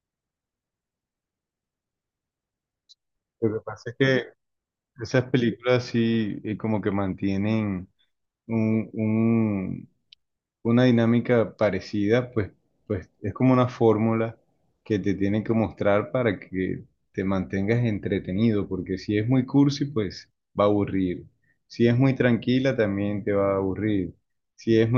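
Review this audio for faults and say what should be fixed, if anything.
No faults are audible in this speech recording, so nothing needs fixing.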